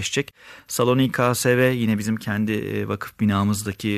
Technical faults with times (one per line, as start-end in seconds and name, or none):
none